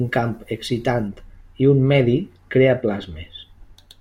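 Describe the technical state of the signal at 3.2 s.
At 3.2 s you're inside a stretch of wrongly applied de-emphasis, running from 1.08 s (right after "camp excitant") to the end. A treble cut meant to undo pre-emphasis hit audio that had none, or was applied twice, so the highs roll off smoothly, about 10 dB down at 10 kHz, and the speech sounds dull and muffled.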